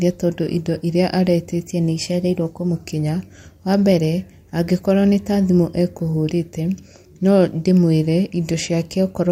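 A drift correction step runs from 1.69 to 2.81 s. For just over a second the speech plays 5.6% fast and rises 95 cents, nearly a full semitone, with speed and pitch shifting together before snapping back to normal at the end. The likely cause is clock-matching software briefly raising the playback rate in one jump to drain a buffer that had filled while two clocks drifted apart.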